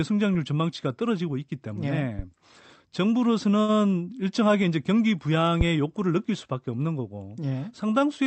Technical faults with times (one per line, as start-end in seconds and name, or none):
3.61-3.71 short stall from a late packet
5.61-5.70 phantom power thump